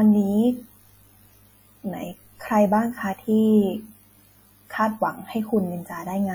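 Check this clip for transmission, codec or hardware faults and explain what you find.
One codec fault runs through the whole clip. The speech sounds ringing and washy, with a hiss that breathes with the signal: likely WMA compression, fitting about 48 kbps. Long transform blocks smear quantisation noise over tens of milliseconds and zero weak lines. A spectrogram shows smeared energy, gaps, and nothing above 20.1 kHz.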